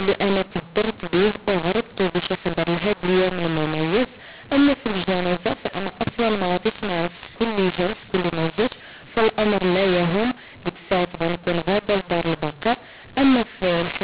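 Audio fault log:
throughout: mu-law and A-law mixed up. The speech was written as A-law but read back as mu-law, so sample levels come out scrambled and near-silent samples are lifted. The speech sounds harsh and distorted, and pauses fill with hiss. On a waveform, the gaps never reach a flat line. On a spectrogram, broadband noise fills the pauses below the 4 kHz telephone ceiling.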